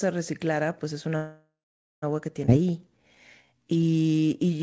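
A call audio freeze runs from 1.16 to 2.05 s. The speech stops and the last sound is carried on as a fading buzz that sinks into about half a second of silence, likely because packets were held up and the jitter buffer ran dry. When the audio resumes it picks up where it left off, so close to 0.9 s of gap has been inserted with nothing lost.

A skip ahead follows at 2.46 to 2.50 s. Playback jumps forward with only a tiny join, and roughly half a second of speech is gone, with the material either side butted together almost directly, as though queued audio was discarded to catch up.

A jitter buffer slow-down then lasts from 2.58 s to the end at 4.62 s. The receiver stretches the speech by repeating single pitch periods and bits of pauses, adding about 0.3 s, so delivery runs at 86% speed at unchanged pitch, sounding drawn out. Through all of this the call codec's band limit is audible, with nothing above 8 kHz.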